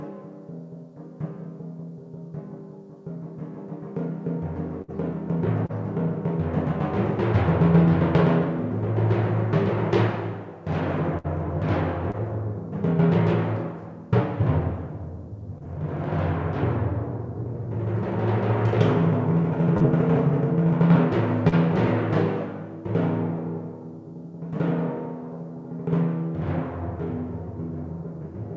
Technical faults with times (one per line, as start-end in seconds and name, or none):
4.82-4.91 burst of packet loss
5.66-5.72 short concealed packet loss
11.18-11.27 burst of packet loss
12.11-12.16 short concealed packet loss
15.58-15.63 short concealed packet loss
19.77-19.83 short concealed packet loss
21.48-21.55 short concealed packet loss